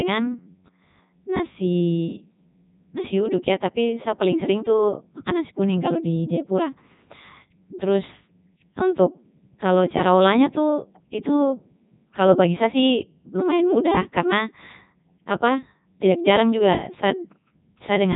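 From start to finish the speech runs through the Codec 2 vocoder, rebuilt from pitch and envelope as sine waves: robotic, buzzy, nothing above 3.8 kHz, consistent with its top 3.2 kbit/s mode.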